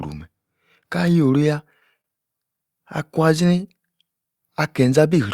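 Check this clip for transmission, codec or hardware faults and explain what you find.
One fault turns up in this speech clip: a short stall from a late packet between 2.01 and 2.06 s. The sound there hangs for a moment, with one syllable held slightly too long and a faint buzzy or dipped quality before it moves on. A packet missed its playout time and the jitter buffer ran dry, so the receiver stretched the last audio by about 29 ms until the packet arrived. Playback then resumed where it had stopped, so nothing was skipped, but everything after that point runs 29 ms later.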